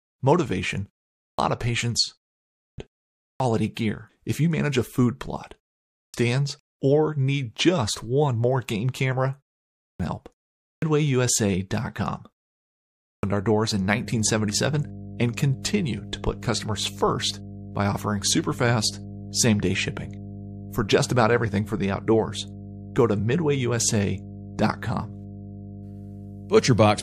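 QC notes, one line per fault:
1.15 to 13.23 s, clipped start after a pause. Seven times, at 1.15, 2.52, 3.17, 5.87, 9.73, 10.57 and 12.99 s, sound resumes abruptly after a pause of 0.3 to 0.73 s. About 230 to 270 ms of its opening is missing each time, including just after "manage a food plot" and at "our doors". The output device sleeps during the silence and needs that long to wake, so the first sounds are swallowed.
3.74 s and 15.62 s, pre-echo. A short hiss of about 22 to 24 ms comes just before a sharp attack, rising about 13 to 16 dB above the quiet background. The codec spreads its quantisation noise across a whole block, which fits a block of about 36 ms. It never switches to short blocks, so noise sized for the loud attack fills the gap before it. The attacks sound smeared.
13.76 s to the end, mains hum. Right after "our doors" a steady low tone at 50 Hz appears and stays to the end of the clip. 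It sits roughly 15 dB below the signal. A ground loop or nearby transformer is coupling the power line into the signal path.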